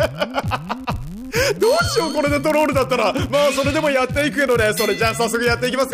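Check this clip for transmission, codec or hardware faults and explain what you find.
One fault is present: a block size mismatch (padded), running through the whole clip. One stage hands on shorter blocks than the next stage reads. The shortfall is filled with zeros. Each block therefore carries a brief silent gap. These gaps repeat at 91.5 Hz and are heard as a steady buzz at that rate. The added gaps stretch the audio, so it plays at 0.996 times normal speed.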